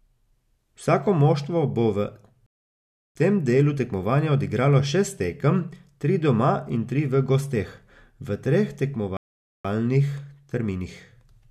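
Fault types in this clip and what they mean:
Rebuffering stall: playback ran dry twice and paused until more audio had downloaded. After "moštvo bo v" the speech drops to silence for about 0.69 s and then resumes with "tem delu tekmovanja odigralo". After "v gosteh v treh" it goes silent again for about 0.48 s. Both times it picks up exactly where it stopped, so nothing is lost, only time is added. On a waveform each stall shows as a flat silent gap, and on a spectrogram as a blank vertical band with sharp edges.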